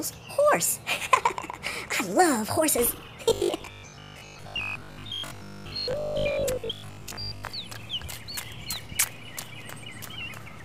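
From 3.26 to 7.54 s the audio turns into robotic sound from repeated short buffers: a rigid metallic buzz at 50 Hz, likely from fragments of about 20 ms being looped while most of the real audio is skipped. Unlike dropouts, there is no silence, only a fixed-rate buzz that follows the original only roughly.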